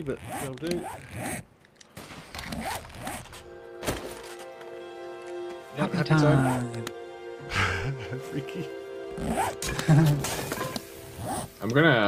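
No technical faults can be heard anywhere in this clip. There is nothing to place at a time and nothing to trace to a cause.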